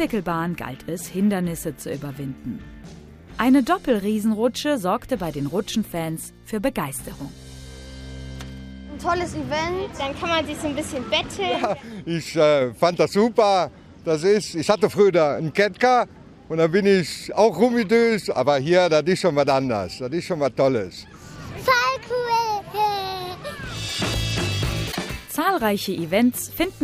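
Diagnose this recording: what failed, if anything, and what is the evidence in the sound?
Codec stage, likely a broken MP3 bit reservoir: dropped frames leave decoding reading wrong bytes, so at 24.91–24.97 s the sound jumps ahead.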